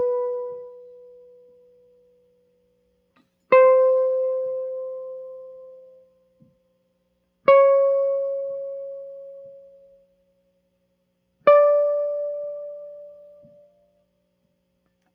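Across the whole music clip, a noise suppressor applied to music is audibly at work. A speech-oriented suppressor is treating sustained tones and room decay as noise, so level swings by around 15 dB as it clamps down and lets go. Attacks punch through while held notes sag, giving a pumping, fluttery, thinned texture. On a waveform the envelope breathes unevenly between transients. A spectrogram shows sustained partials and reverb tails fading abruptly rather than decaying smoothly.

Three stretches of sound are cut by the noise suppressor, where it dips harder than elsewhere. From 0.49 to 2.42 s, held material sinks by up to about 13 dB across most of that span. From 6.01 to 6.5 s it drops about 13 dB, and from 9.89 to 10.13 s about 12 dB. Each sounds like the music ducking away or a decay being chopped short. They show as hollowed-out regions in the waveform and darkened, gated bands in the spectrogram.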